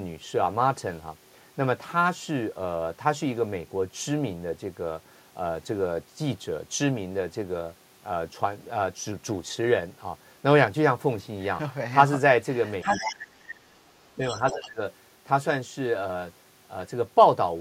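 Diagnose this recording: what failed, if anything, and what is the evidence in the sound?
The talker ducks by about 30 dB at 12.83–13.65 s, and more briefly at 14.16–14.22 and 14.52–14.81 s. This is speech suppressed in double talk, likely from the echo canceller in call processing.

A fainter second voice, about 10 to 15 dB down, appears at 12.9–13.12 s and 14.26–14.67 s. This is the other side's voice leaking through, likely loudspeaker echo the canceller missed.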